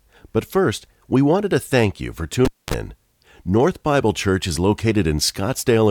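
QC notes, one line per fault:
2.45–2.74 s, cable pulled and plugged in: right after "to thank you for", a pop cuts the sound to near silence for 0.24 s as the live lead comes out. Reinsertion adds 37 ms of 50 Hz mains buzz while only the tip connects, then another pop.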